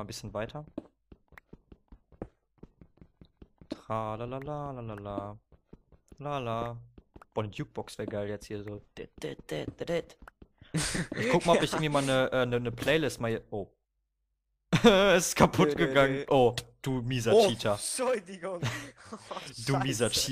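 No technical faults can be heard anywhere in the recording, and the signal stays steady and intact throughout.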